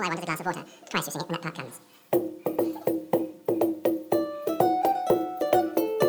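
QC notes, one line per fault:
Throughout: audio read two samples at a time (double speed). Each pair of samples was taken as one frame, so the sound plays twice as fast and 12 semitones higher. Spectrogram: shifted up an octave. Waveform: events squeezed to half spacing.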